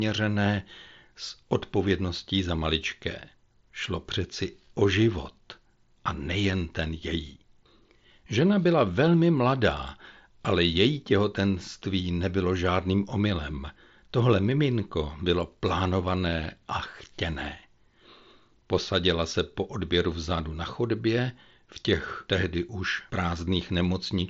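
Nothing goes wrong anywhere in this speech, which simply carries the sound of a Bluetooth headset on the mSBC codec, with the top end stopping at about 7.7 kHz and a faint graininess on the louder moments.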